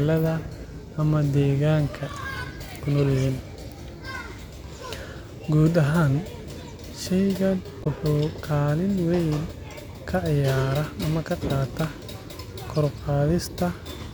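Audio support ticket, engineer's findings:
Short glitch in the speech at 7.80–7.87 s, about 70 ms. Damaged data in the compressed stream. Corrupt bytes in the encoded frames at that point; the decoder misreads them, loses frame sync, and resumes at the next valid header.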